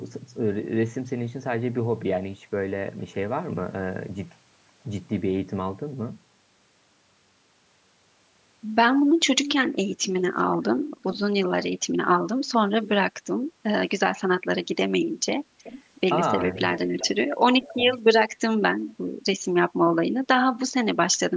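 Echo leak: the loudspeaker side's echo canceller likely let some of its microphone pickup through, so a delayed copy of the speech, about 0.38 to 0.40 s late and well below the direct speech level, returns at 9.45 to 9.52, 10.38 to 10.44 (barely audible), 11.02 to 11.19, 15.58 to 15.83, 16.41 to 17.08 and 17.61 to 17.99 s.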